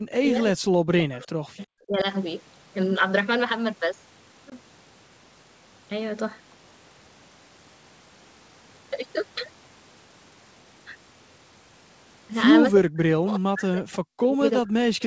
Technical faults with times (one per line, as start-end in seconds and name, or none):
0.00-1.42 speech suppressed in double talk
1.57-1.65 echo leak
1.86-2.06 speech suppressed in double talk
4.50-4.54 packet loss on an ADPCM call
12.75-15.02 speech suppressed in double talk